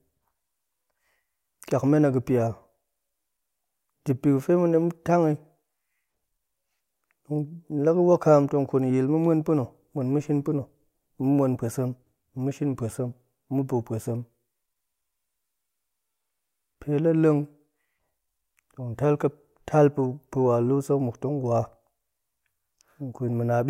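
No technical faults turn up anywhere in the speech recording. Nothing in it needs a timestamp or a closer look.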